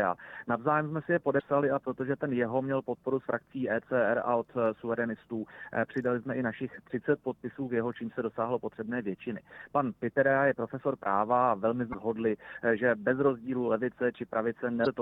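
At 1.37, 11.90 and 14.83 s, damaged data in a compressed stream makes the decoder lose sync for about 40 ms, giving a brief glitch.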